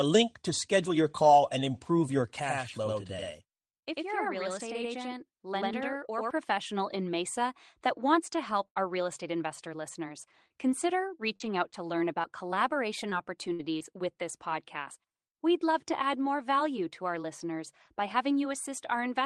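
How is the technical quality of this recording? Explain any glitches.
The recording has four distinct faults, all clustered in the first three quarters of this speech clip.

Channel delay (doubling), 2.40 to 6.31 s: one channel runs about 93 ms behind the other, which fits a 4096-sample buffer, and the two are folded together into mono. Because the lag is well past the point where the ear fuses the copies, each syllable is followed by a distinct second hit at equal level. It sounds like a tight slapback echo or two people speaking in near-unison.

Burst of packet loss, 8.68 to 8.78 s: roughly 80 ms of consecutive audio never arrived in time. The receiver bridged the hole for about 78 ms by stretching the last received sound and fading it down. A voiced sound turns into a brief held buzz and anything noisier into a decaying hiss. The speech then picks up again with that stretch simply gone, a small skip in continuity.

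Lost packet rebuilt from error correction, 8.76 to 8.78 s: the final 20 ms frame of that burst was recovered from the low-bitrate backup copy carried in the following packet, Opus in-band forward error correction. The decoder therefore plays something instead of silence, but that frame is coarser and grainier. It makes a rough seam just as normal audio resumes.

Scattered short gaps, 10.48 to 13.86 s: across this span about seven isolated packets went missing or late, the longest near 50 ms. Together the losses took out around 180 ms of material. The receiver covered roughly 150 ms by extending the preceding sound, some 220 ms was rebuilt from redundant data, and about 20 ms of extra padding crept in. Only about 5 percent of the stretch is affected, so the speech stays clear but carries sporadic ticks, smeared syllables and small hiccups.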